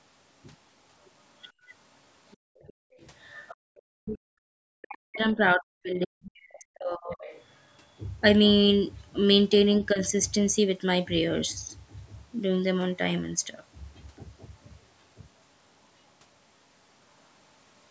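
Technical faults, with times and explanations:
1.47–1.51 s, 2.31–3.81 s and 7.22–7.44 s, other side's voice leaking through: a second voice is faintly audible behind the speech, very quiet in the first scrap and somewhat stronger, roughly 25 dB down, in the later two. This is likely loudspeaker playback that the echo canceller failed to fully remove from the microphone.
1.52–1.70 s, 2.37–3.00 s and 3.55–3.73 s, background gated by the echo canceller: the room sound dips abruptly, by about 24 dB, 40 dB and 34 dB respectively, then returns. While the loudspeaker was active, the canceller clamped the microphone hard, so the ambience briefly drops out.
4.01–7.26 s and 9.92–9.98 s, speech suppressed in double talk: the talker's speech is pushed down heavily over the longer stretch, by something like 40 dB at worst, and dips only slightly in the brief later moment. This likely happened because both sides spoke at once and the canceller attenuated everything.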